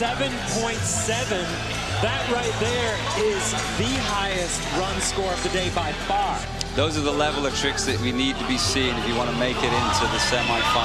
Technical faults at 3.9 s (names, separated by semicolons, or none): none